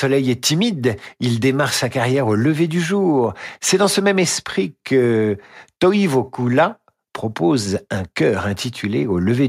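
Listening to this speech recording, nothing stood out as a technical problem at any point.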